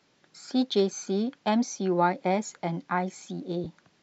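From 3.64 to 3.66 s, lost LE Audio frames interrupt the speech. About 20 ms went missing, which fits two 10 ms frames, and the LC3 decoder filled the gap by repeating the last spectrum with randomised signs, producing a brief noisy smear in place of the voice.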